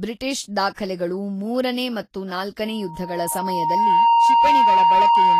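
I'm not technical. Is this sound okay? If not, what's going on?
No. Three problems can be heard in this speech clip.

Throughout, the speech sounds grainy and hissy, and nothing is present above 14.2 kHz. This is likely Vorbis compression at a low quality setting. Unlike background noise, the hiss follows the speech itself and vanishes in pauses.

At about 0.74 s there is pre-echo: a brief hiss, about 32 ms long, comes just before a sharp sound and smears its start. Unlike an echo or reverb, it comes before the sound, not after it.

From 2.65 s, right after "ಮೂರನೇ ಮತ್ತು", a loudspeaker feedback squeal starts. A steady 932 Hz tone grows over roughly a second and a half until it is louder than the speech, and it lasts to the end. Unlike a steady hum, it swells up from nothing.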